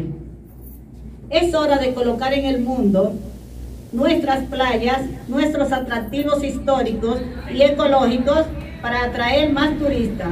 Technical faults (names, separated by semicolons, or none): video or display buzz